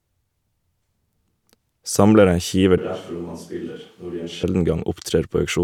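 A switch to a distant microphone runs from 2.78 s to 4.43 s in this speech clip. At 2.78 s the voice abruptly turns roomy and hollow, loses its low end and drops by around 10 dB, while room noise rises to sit only about 30 dB below the speech. The likely cause is that the close microphone's signal dropped out and a far-off pickup, such as a camera's, filled in. At 4.43 s the close sound snaps back.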